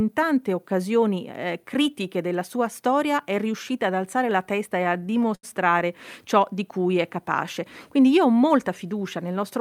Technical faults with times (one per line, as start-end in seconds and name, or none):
4.77-5.82 repeated stalls (stutter)